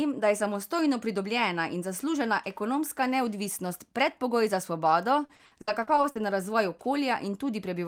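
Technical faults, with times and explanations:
5.25–6.17 s, repeated packet loss (robotic sound): right after "neodvisnost predpogoj za svobodo", the speech breaks into a chain of short dropouts, the longest about 60 ms, with roughly 320 ms of the stretch, about 35%, rebuilt by concealment. Each gap is covered by extending the preceding fragment, and another gap arrives before the signal recovers, so the repeated stretched pieces give a choppy texture with bits of the syllables missing.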